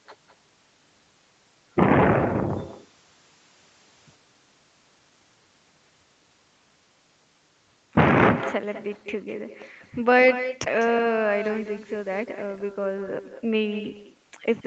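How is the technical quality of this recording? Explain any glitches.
The recording carries an uncancelled echo throughout, and its content stops at 8 kHz, as expected from a call path. The echo with no canceller runs through the whole clip: every phrase returns about 13 dB quieter, roughly a fifth of a second later, and thinner. On a waveform or spectrogram, each burst is trailed by a fainter duplicate.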